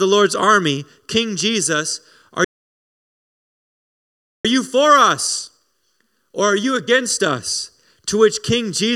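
At 2.44 s the speech just cuts out and stays silent for about two seconds, picking up again at 4.45 s. That's a playback stall. The player likely ran dry of buffered data or had its thread held up, so nothing reached the output until it recovered.

From 4.45 to 7.45 s there's time-compressed catch-up. The player is trimming its backlog by snipping out small slices and cross-fading the joins, so the speech runs about 1.1 times fast at normal pitch.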